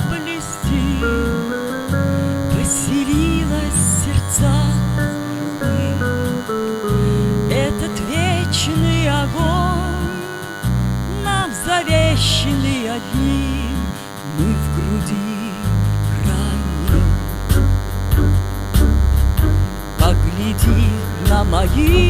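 Right through the clip there's a DECT cordless phone buzz: a nearby handset's 100 Hz radio bursts get rectified, giving a thin, harmonic-rich buzz roughly 15 dB below the main sound.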